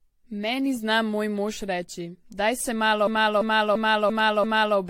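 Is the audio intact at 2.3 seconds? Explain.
No, at 2.3 s you're hearing generation loss, and it runs through the whole clip. It's likely repeated AAC-style encoding, around four passes near 64 kbit/s by the sound, each requantising on a shifted frame grid. The speech sounds swirly and hollow, with smeared attacks and nothing above 16.6 kHz.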